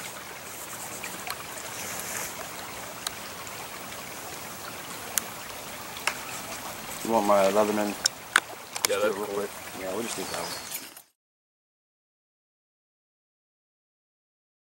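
No technical faults can be heard anywhere in the audio. Near the end, from around 10 s, the level fades out smoothly to 11.17 s, with no click or hard edge.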